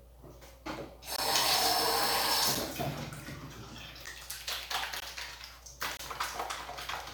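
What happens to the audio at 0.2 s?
Nothing goes wrong at 0.2 s; the sound plays through that moment intact, with no dropout, click or distortion.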